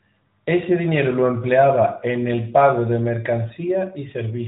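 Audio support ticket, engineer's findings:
No faults found in this speech clip.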